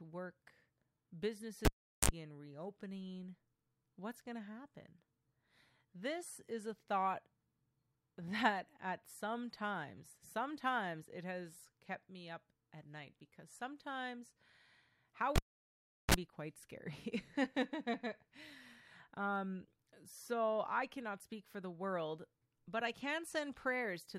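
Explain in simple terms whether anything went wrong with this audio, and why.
A cable pulled and plugged in happens twice, at 1.65 s and at 15.36 s. Each time there's a pop as the live lead comes out, then near silence: about 0.4 s the first time, about 0.74 s the second. While the plug goes back in, only its tip touches at first, letting in a short burst of mains buzz (a 50 Hz hum lasting 46 ms, then a 60 Hz hum lasting 30 ms) before a second pop brings the speech back.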